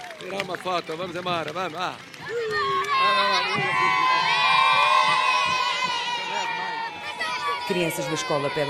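No technical faults can be heard in this audio, and the signal stays steady throughout without any audible disturbance.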